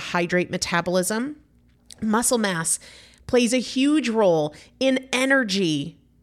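A speech recording; no technical faults can be heard.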